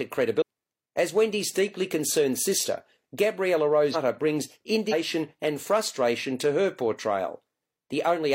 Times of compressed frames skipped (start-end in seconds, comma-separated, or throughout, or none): 0.37-0.42, 3.90-3.96, 4.88-4.93